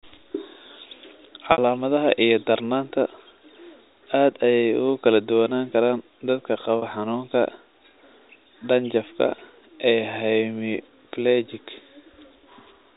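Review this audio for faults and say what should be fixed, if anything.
Packet loss with pitch repetition occurs at 1.52 s, lasting about 60 ms, and at 6.78 s, lasting about 40 ms. In both gaps the receiver concealed the missing audio by looping the last pitch period and fading it out. Both gaps are short, so the speech briefly holds on a slightly buzzy, sustained tone rather than dropping out. The 60 ms gap fits roughly three lost 20 ms packets. The G.711 telephone coding itself keeps the audio band-limited below 4 kHz, with only faint quantisation noise. Adding a larger jitter buffer, forward error correction or packet redundancy on the network path would stop these gaps from reaching the listener.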